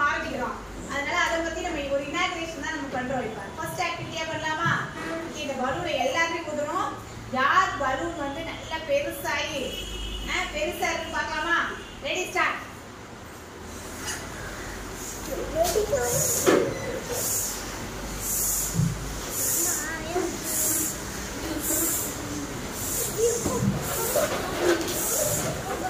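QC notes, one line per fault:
Nothing stood out on listening to the recording.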